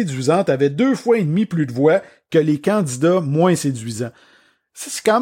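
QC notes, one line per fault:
No faults found on this speech clip.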